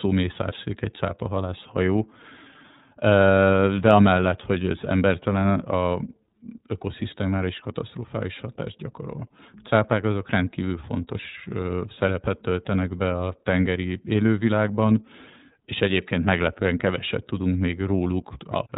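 From start to finish the speech carries iLBC codec damage, plainly audible. Nothing above 4 kHz survives, so it sounds narrowband and dull. Each frame's excitation is coded on its own, which fits 30 ms frames near 13.3 kbps. The result is a rough, slightly synthetic quality.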